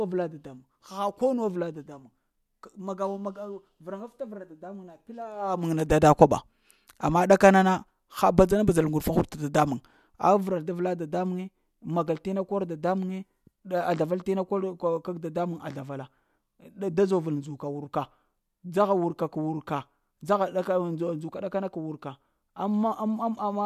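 Nothing here needs fixing, just a speech recording with no technical faults to point to anywhere along the way.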